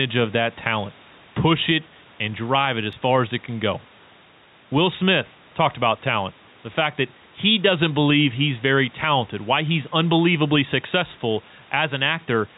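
Throughout the speech, the input gain is likely set too high and a fast limiter keeps pulling it down, so the level swings by about 5 dB and the sound is squashed. At 2.93 s, between "it and drive it" and "far as it can", a block of digital silence about 1.3 ms long cuts the audio out with no fade. This fits a 64-sample output buffer left unfilled, and it is heard as a tick.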